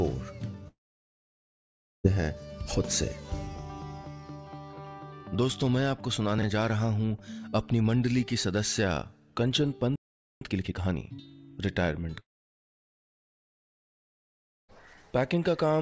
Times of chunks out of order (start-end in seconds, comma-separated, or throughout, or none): 6.38-6.43